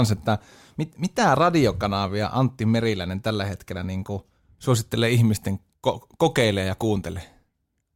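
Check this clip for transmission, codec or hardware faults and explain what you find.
No faults found.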